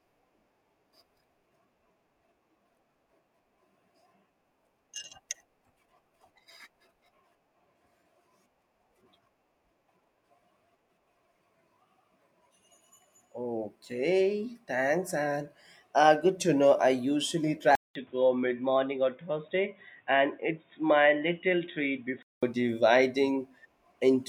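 After "to know I usually", 17.75 s brings a 200 ms gap, then dull, quieter sound topping out at 3.8 kHz until 22.43 s, likely the input switched to a poorer device.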